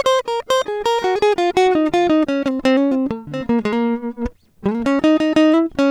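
No technical faults are audible.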